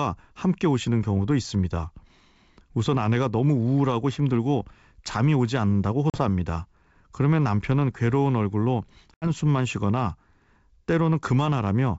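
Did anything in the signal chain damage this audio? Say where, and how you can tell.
Yes, at the network stage: packet loss on an ADPCM call, on this G.722 wideband link. About a couple of packets dropped at 6.10 s and about four at 9.14 s, leaving hard-edged silent holes of 40 ms and 80 ms. Each time, the speech returns slightly distorted, because the decoder's predictor and step size had drifted from the sender's, and it settles by 6.21 s and 9.27 s.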